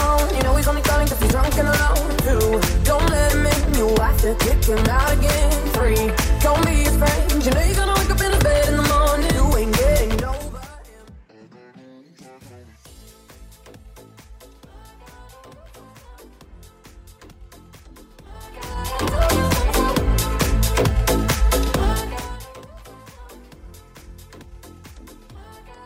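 From 10.07 to 10.84 s, zipper noise: the level drops about 25 dB in 3 dB jumps, around ten a second, each clicking, unlike a smooth fade.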